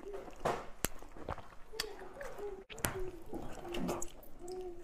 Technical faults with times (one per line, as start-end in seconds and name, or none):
0.85 file header played as audio
2.85 file header played as audio